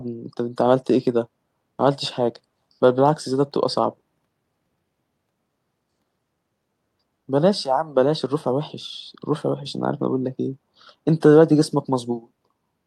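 No technical faults can be heard anywhere in the speech.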